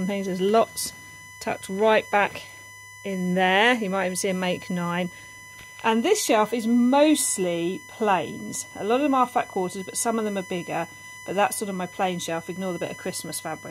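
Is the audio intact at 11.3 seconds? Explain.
No. At 11.3 s, as throughout the clip, there is USB whine: a steady, fixed-pitch tone at 1 kHz, strongest at its 2 kHz harmonic, roughly 20 dB below the signal. The USB bus draws current in 1 ms frames, and that ripple leaks into the audio through the power or ground.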